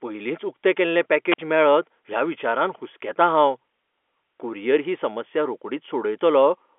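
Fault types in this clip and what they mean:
Wireless microphone squelch dropout: at 1.29 to 1.39 s, between "पयलींच उकतें केल्लें" and "मेळत ह्या विचारान हुसकेतां", the transmitter's radio signal fades, static briefly rises, and the receiver's squelch mutes the output for 49 ms before the speech returns.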